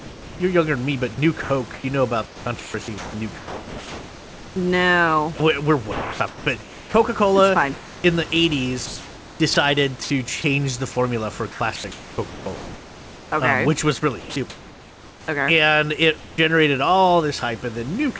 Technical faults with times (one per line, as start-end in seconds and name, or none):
0.00-4.56 sound chopped by the voice detector
5.38-8.04 sound chopped by the voice detector
9.54-10.44 sound chopped by the voice detector
11.52-12.46 sound chopped by the voice detector
14.20-15.28 sound chopped by the voice detector
16.18-16.38 comfort noise in place of the background
18.18 sound dropped by the voice detector